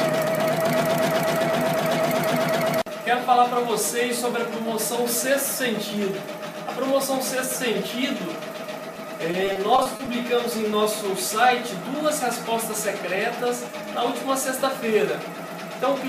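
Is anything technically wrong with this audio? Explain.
Yes, there are two packet-loss faults. At 8.94 s, a short concealed packet loss: about 10 ms never arrived, and the receiver extended the preceding sound to cover it, leaving a brief smear or wobble. From 9.31 to 10.07 s, repeated packet loss (robotic sound): eight gaps, the longest 30 ms, were each patched by continuing the last sound, concealing about 160 ms in all. That choppy patchwork covers roughly a fifth of the stretch.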